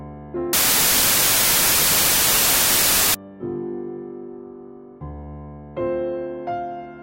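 From 0.53 to 3.14 s a loud wash of noise buries the sound, which is slowed to 0.75 times speed and lowered in pitch. This is a wrong sample width: 32-bit integer data read as packed 24-bit, so mismatched bytes form most values.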